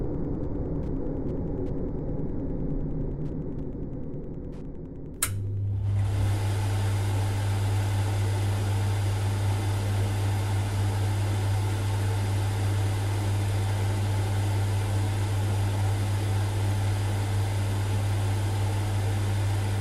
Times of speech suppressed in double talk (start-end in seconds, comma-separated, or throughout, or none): none